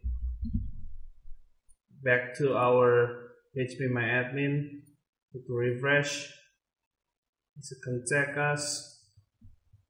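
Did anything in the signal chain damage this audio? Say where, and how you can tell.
No, nothing in the signal chain audibly damaged this audio. No stage from capture through playback leaves a mark that can be heard here.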